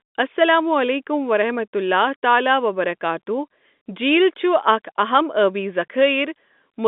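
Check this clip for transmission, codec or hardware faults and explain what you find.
No faults turn up in the speech, which carries the narrow band of ordinary G.711 telephone coding, roughly 200 Hz to 3.6 kHz, with at most faint coding damage.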